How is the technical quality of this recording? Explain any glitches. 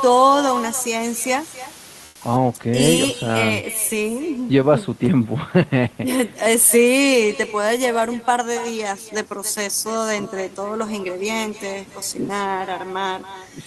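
The recording has three audible faults: a persistent echo, a hissy opening, and a brief patch of synthetic background.

Echo with no canceller runs through the whole clip. The far end's loudspeaker output is being picked up by its microphone and sent back without removal. Every phrase is followed roughly 300 ms later by a copy about 16 dB quieter. The copy sounds thinner than the direct sound, so the audio seems doubled.

Low bit depth with dither affects 0.00 to 2.36 s. The audio is quantised to only 7 bits, with dither added before rounding, so the rounding error becomes random noise rather than distortion. The result is a steady, even hiss sitting around 20 dB below the signal. The hiss stops at 2.36 s, and the cleaner sound that follows shows the faint room noise underneath, about 39 dB below the speech.

Comfort noise in place of the background occurs from 2.07 to 2.19 s, lasting 120 ms. 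The real background drops away and is replaced by a smooth, featureless noise about 6 dB quieter, then the normal sound resumes. The likely cause is Opus discontinuous transmission. The sender's voice detector judged the moment silent and stopped sending, and the receiver filled the gap with generated noise shaped roughly like the background.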